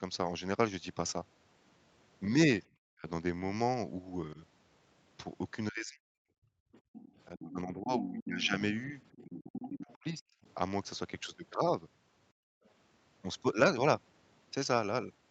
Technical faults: speech suppressed in double talk; background gated by the echo canceller; other side's voice leaking through

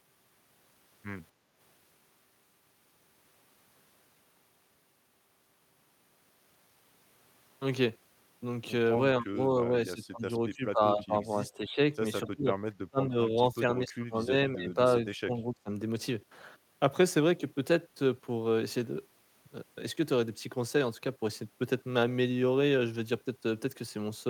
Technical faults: background gated by the echo canceller; speech suppressed in double talk

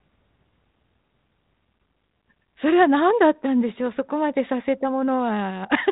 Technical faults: none

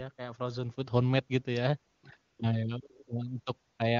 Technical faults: AMR comfort noise

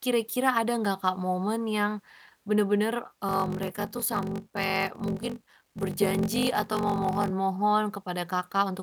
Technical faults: block size mismatch (padded)

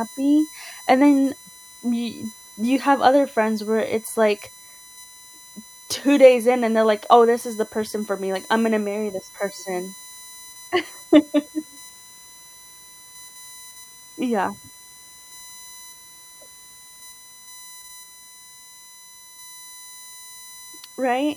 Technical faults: USB whine

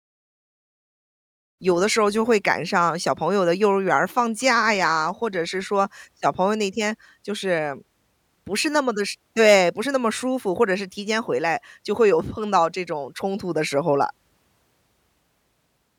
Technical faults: none

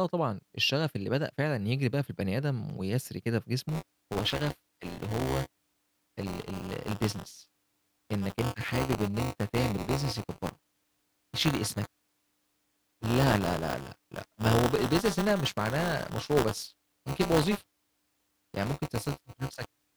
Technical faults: buffer tearing

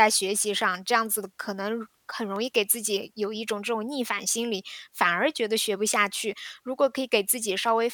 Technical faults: clock drift buffer slips

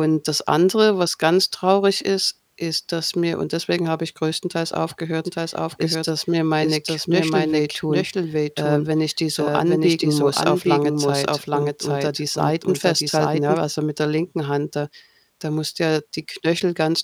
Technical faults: doubled audio track

